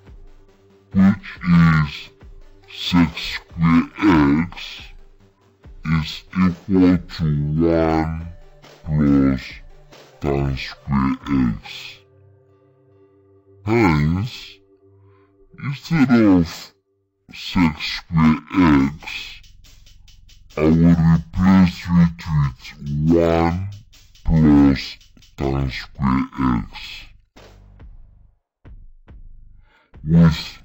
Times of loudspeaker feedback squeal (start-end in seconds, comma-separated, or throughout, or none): none